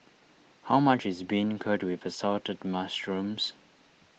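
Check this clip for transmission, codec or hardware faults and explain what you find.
Nothing here needs flagging: the speech has the full bandwidth and light coding texture you'd expect from Opus voice compression in its hybrid mode, which fits a bitrate of about 20 kbps, and nothing else stands out.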